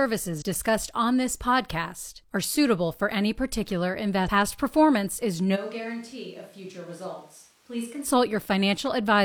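A short glitch breaks in at 0.38 to 0.42 s, just before "on this podcast are", and another at 4.23 to 4.28 s, right after "suitable for any particular". Both come from damaged data in a compressed stream. Corrupted bytes in those frames made the decoder misread or reject them and lose sync while it hunted for the next valid frame header. Each glitch lasts under 50 ms.

From 5.57 to 8.03 s, starting after "performance is", the speech suddenly turns roomy and hollow. It drops by roughly 10 dB and loses bass, and background room noise rises to around 25 dB below the speech. The change back is just as abrupt. This is likely a switch to a distant microphone, with a farther-off pickup standing in for the close one during that stretch.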